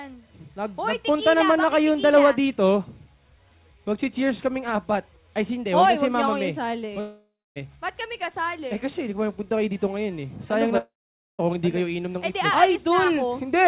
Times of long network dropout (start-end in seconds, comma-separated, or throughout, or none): 7.00-7.58, 10.78-11.41